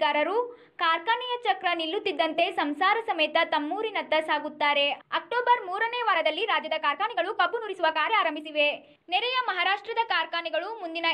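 From 6.05 s to 8.51 s the audio has a time-stretched section: the pace jumps to about 1.37 times normal while pitch stays unchanged, sounding rushed. The likely cause is software squeezing that stretch to fit a length by dropping short pieces.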